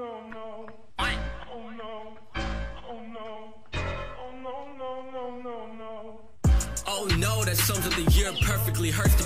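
At 0.31 s a DC step shifts the waveform's zero line by about -42 dBFS and holds to the end, giving one low thump while the sound continues unbroken, unlike a dropout.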